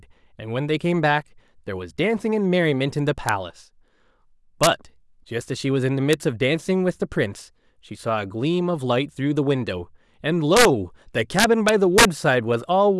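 Integer overflow hits the speech at 3.29, 4.63 to 4.67, 6.13, 10.57 to 10.65, and 11.39 to 12.05 s. Loud peaks, pushed up to about 5 dB past full scale, wrap to the opposite sign instead of limiting. They sound like violent cracks on peaks, or a tearing buzz where the overload is largest, harsher than clipping.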